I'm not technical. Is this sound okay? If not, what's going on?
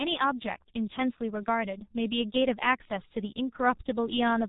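No. The speech sounds muffled and hoarse throughout, with smeared consonants. That's the G.723.1 codec, an old internet-phone format that discards everything above about 3.8 kHz.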